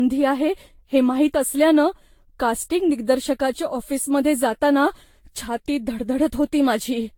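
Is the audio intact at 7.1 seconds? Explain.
No, at 7.1 seconds the speech carries generation loss, and it's there for the whole clip, not just that moment. It has the swirly, hollow, smeared quality you get when audio has likely been decoded and re-encoded over and over, here roughly seven times, which fits a Vorbis-type codec around 68 kbit/s. Each pass requantises on a shifted frame grid, so the noise and spectral holes pile up and the attacks go soft. Nothing sits above 19.2 kHz.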